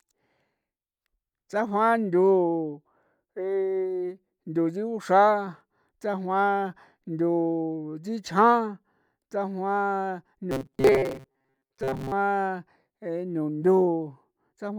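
From 10.51 to 12.13 s the speech turns into a rigid, metallic buzz fixed at 133 Hz, still loosely tracking the words. This is robotic sound from repeated short buffers, likely caused by audio arriving too seldom, so a chunk of about 7.5 ms is replayed through most of that stretch.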